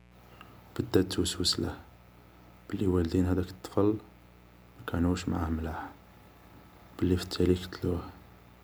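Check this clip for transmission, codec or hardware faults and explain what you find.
One fault runs through the whole speech clip: mains buzz. Interference from the 60 Hz supply, through a dimmer, a rectifier or a missing shield, is injecting sharp switching spikes twice per mains cycle. Each spike carries a ladder of 60 Hz harmonics reaching up to several kilohertz. The result is a steady, raspy buzz from start to finish, sitting roughly 30 dB below the speech.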